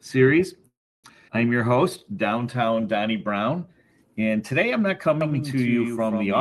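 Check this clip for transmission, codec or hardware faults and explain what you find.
Four faults stand out, all riding on a call path whose band-limiting around 12 kHz fits the Opus codec.

Call audio freeze, 0.67 to 1.07 s. The likely cause is packets stalling in transit so the jitter buffer ran dry. The receiver stretched the last sound briefly, then fell to about 0.32 s of silence before playback resumed exactly where it left off. The roughly 0.36 s gap is inserted time: nothing is lost, but the flow stops dead and restarts.

Skip ahead, around 1.28 to 1.31 s. Here a stretch of audio was discarded while later material was already queued, either dropped in transit or flushed when the jitter buffer overflowed. Roughly 150 ms vanishes, and the two sides are butted together with only a few milliseconds of fill. It sounds like an abrupt forward jump, a clipped-out fragment rather than a pause.

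Jitter buffer slow-down, 1.58 to 2.82 s. With its reserve running low or its target delay just raised, the buffer built up a reserve by repeating single pitch periods and slivers of pauses many times over, adding about 151 ms across the span. Playback runs at about 88% speed while pitch stays put, so sounds come out drawn-out.

Doubled audio track, from 5.21 s to the end. A second full-band copy of the same audio enters abruptly, about 5 dB quieter and roughly 150 ms behind, most likely from a second, slower capture path being mixed in. It carries no room decay or colouration, so it reads as a dry, flamming slapback that persists through the final second or so.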